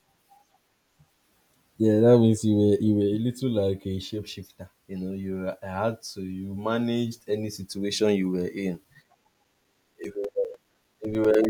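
From 8.74 s to 11.45 s, the speech carries periodic USB or driver dropouts. Every 0.1 s, something stalls the USB bus or audio driver. A few milliseconds of signal go missing each time, roughly 4 ms, and silence fills the gap. That makes around thirty gaps in this stretch. They sound like a steady train of small ticks, ten per second, heard only while the voice is sounding.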